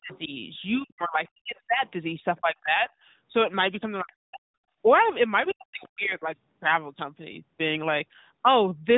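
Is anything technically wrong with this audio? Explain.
Yes, two related problems. There's speech suppressed in double talk at 0.0 to 0.32 s, 0.77 to 1.85 s, 2.4 to 2.89 s, 4.01 to 4.44 s and 5.52 to 6.28 s. The talker drops away sharply, by something like 40 dB at worst (closer to 30 dB around 2.4 s). The longest hole is around a second near the start. The likely cause is an echo canceller that couldn't tell this voice from loudspeaker echo and ducked everything.

There's also a brief scrap of the other side's voice leaking through at 0.12 to 0.19 s. It's faint, well below the main speech, and it's most likely loudspeaker playback the echo canceller didn't fully scrub from the microphone, so it slips in as a fragment.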